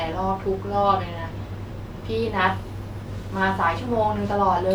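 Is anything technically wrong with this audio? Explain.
No, nothing technically wrong can be heard in this speech recording. No fault turns up anywhere in it.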